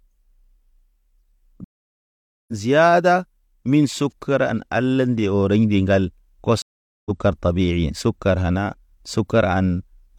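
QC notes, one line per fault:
1.64 to 2.53 s, stream reconnect: the stream drops out for about 0.84 s of silence while the player re-establishes the connection, then a fresh decoder picks up mid-stream, so the audio resumes roughly half a second later than where it broke off, landing on "ziada min sukuran ala" with a faded-in onset.
6.62 to 7.11 s, stream reconnect: a second connection break leaves about 0.44 s of silence before the player reconnects and restarts decoding; playback rejoins the stream roughly a third of a second further on, so a short stretch of speech is skipped and the return fades in.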